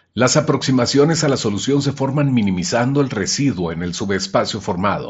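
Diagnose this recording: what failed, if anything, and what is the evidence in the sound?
No fault found; the speech sounds intact throughout.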